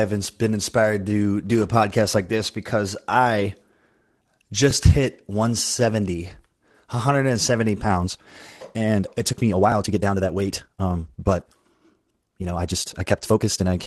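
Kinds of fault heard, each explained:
Lost packet rebuilt from error correction: Three 20 ms gaps were filled from backup copies. They sound briefly rougher and noisier, near 1.6, 3.4 and 11.4 s.
Overlapping chunks: Every 5 s, a chunk starts 12 ms early and repeats a sliver. This gives brief stutters at 4.71 and 9.72 s.
Time-stretched section: From 7.8 s on, the speech runs about 1.6 times faster and sounds rushed, though the pitch stays put. It was likely sped up by software.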